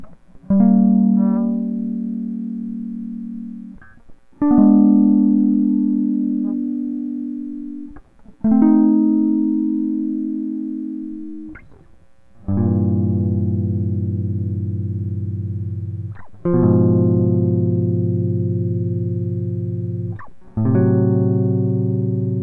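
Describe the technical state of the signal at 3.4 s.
At 3.4 s the music plays through intact, with no dropout, click, distortion or other technical fault to be heard.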